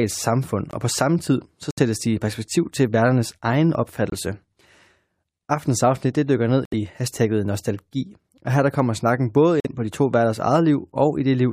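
Speech with five abrupt silent holes at 0.71 s, 1.71 s, 4.10 s, 6.65 s and 9.60 s, each 36 to 88 ms long, where the sound cuts out and resumes on time: corrupt frame muted, where the decoder rejected damaged compressed frames and the player filled each gap with silence.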